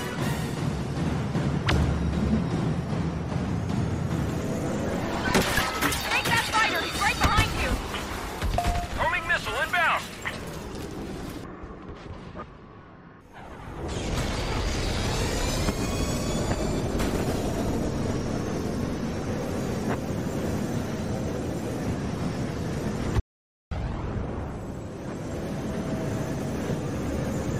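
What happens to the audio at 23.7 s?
At 23.71 s the sound returns after an audio dropout to silence. It cut out at 23.20 s, leaving about half a second of total silence with no room tone. The input was likely lost while recording carried on writing silence. Whatever occurred in that gap is gone.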